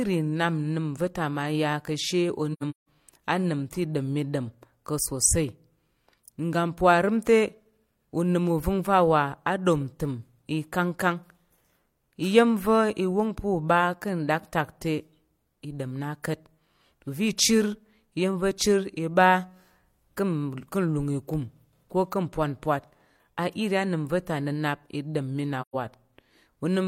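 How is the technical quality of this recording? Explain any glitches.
The speech has two brief holes caused by AAC frame loss with muting. From 2.53 to 2.87 s, about 256 ms of audio vanishes in several gaps scattered over 341 ms, the longest about 150 ms. At 25.61 to 25.75 s, 128 ms of audio is lost. The decoder zeroed the missing frames, and the overlapping windows fade the sound out and back in. That soft taper sets these apart from hard sample dropouts.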